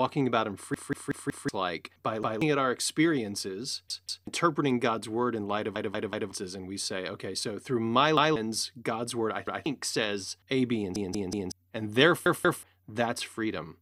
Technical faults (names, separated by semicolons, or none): repeated buffer